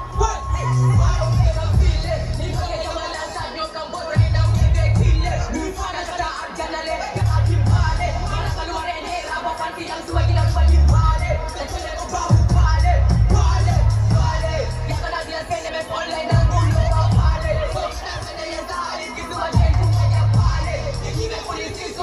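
At 7.2 s there is a short blip, and another at 15.68 s. Both come from damaged data in a compressed stream. Each lasts under 20 ms. At these points the stored bytes are wrong. The decoder cannot read the frames correctly. It loses its place and hunts for the next valid frame header. The bad stretch comes out as a brief chirp, squawk, click or short hole. Then the sound carries on.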